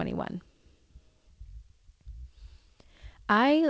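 No technical faults can be heard in this speech; it has passed through a G.722 call path that is working normally and leaves nothing above 8 kHz.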